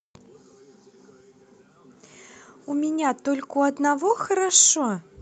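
Speech carried over a WebRTC call path, band-limited at about 8 kHz as that codec setting would give, with no faults found.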